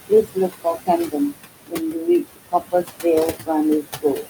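Right from the start you can hear noise suppressor artifacts running the whole way through. The room noise sits only about 9 dB under the speech, and the suppressor pulls what it judges to be steady noise down by about 19 dB, frame by frame. So the background dips in the gaps and swells back up under the talking.

There is also speech cut by the noise suppressor, which happens four times. Between 0.09 and 0.89 s, about a third of a second's worth of speech gets mistaken for noise and dropped by up to about 18 dB. It happens again from 1.07 to 1.36 s, losing around 150 ms at up to about 20 dB. The worst stretch is 1.67 to 3.05 s, where roughly 700 ms is knocked down by up to about 22 dB. The last one runs from 4.02 s to the very end at 4.29 s, about 150 ms down by up to about 21 dB. In all four, the affected speech sounds swallowed or faint.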